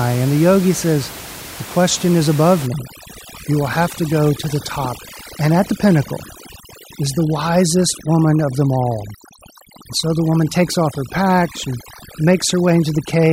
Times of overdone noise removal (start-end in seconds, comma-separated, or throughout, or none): 2.67-13.32